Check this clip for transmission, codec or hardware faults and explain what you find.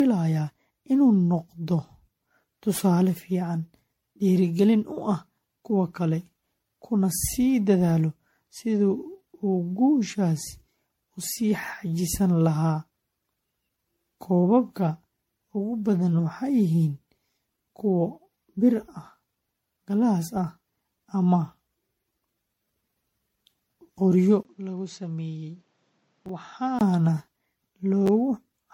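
Three faults can be heard: lossy-codec damage across the whole clip, a drop in quality near the end, and two brief jumbled moments.

Generation loss runs throughout. The sound is swirly, smeared and hollow, attacks are blurred, and nothing reaches above 16.5 kHz. This is more damage than a single 64 kbit/s MP3 pass would cause. The likely cause is repeated decoding and re-encoding, something like ten passes. Each pass quantises again on a shifted frame grid, so noise and spectral holes pile up.

Input switched to a poorer device, from 24.43 to 26.81 s. A gap of about 20 ms of silence marks the change. After it the sound turns dull and boxy, with nothing above 7.8 kHz. The level falls by roughly 10 dB, and new background noise sits about 40 dB under the signal. The likely cause is the system changing its input mid-recording to a narrower-band microphone or a headset call profile.

Chunks out of order occur at 26.26 to 26.29 s and at 28.06 to 28.09 s. 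The garbled jumps fit blocks of about 10.7 ms being written late. In the first event a block plays two blocks after its proper place. In the second it plays one block late. No audio is lost, but the sequence is wrong. This leaves hard joins that sound like brief scrambled stutters.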